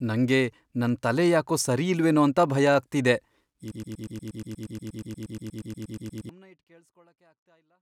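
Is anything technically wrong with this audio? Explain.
Yes. Right after "ಸರಿಯಿಲ್ವೇನೋ ಅಂತ ಭಯ ಆಗ್ತಿದೆ", from 3.72 s to 6.29 s, the speech falls into a broken-record loop. A fragment of about 119 ms repeats exactly, back to back, 22 times, giving a rapid stutter. Whatever should have followed in those 2.6 seconds is gone. The likely cause is a player, encoder or stream stalling and resending its last buffered piece. On a waveform the segment shows an identical shape tiled every 0.12 s. A spectrogram shows the same narrow pattern stamped repeatedly in a rigid vertical-stripe rhythm. The level then tapers away in a smooth fade-out ending at 7.82 s.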